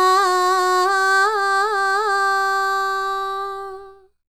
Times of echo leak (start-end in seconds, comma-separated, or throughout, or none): none